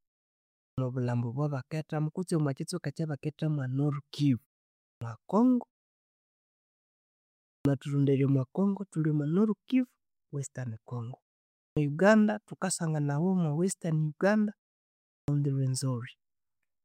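Speech with a clipped start after a pause at 0.6 s, just before "obwabakethamu kutsi omwakyitsweka ekyabakethamu", then at 4.83, 7.48, 11.58 and 15.12 s. The output device dozes in the silence and needs about 160 to 190 ms to wake, so each onset is swallowed and the sound lurches in abruptly.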